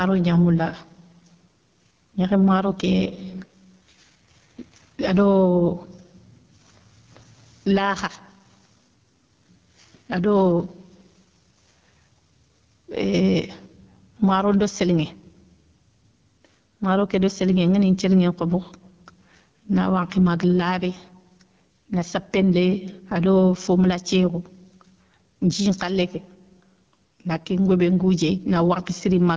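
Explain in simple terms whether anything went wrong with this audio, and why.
The microphone level was likely set far too high, so a fast limiter kept pulling it down on every loud sound throughout. This gain pumping leaves the speech squashed.

The call was also carried by the AMR wideband (HD Voice) codec at what sounds like one of its lowest settings. Squeezed that hard, the codec's model of the voice breaks down, so from start to finish the speech sounds rough, raspy and grainy.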